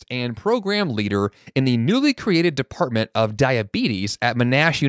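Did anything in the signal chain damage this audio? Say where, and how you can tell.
Yes: from 0.08 to 1.29 s the speech and the background swell up together by about 6 dB, settling just before "in the newly created". This is automatic gain rising in the call processing: the AGC judged the input too quiet and ramped its gain up gradually.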